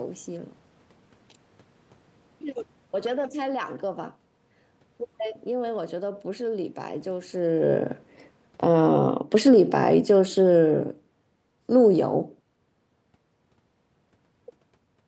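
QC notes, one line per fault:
7.34–12.14 s, automatic gain falling: the level sinks by about 7 dB over nearly five seconds as the gain control backs off. Unlike the talker's movement near 7.5 s, the room noise drops along with the speech.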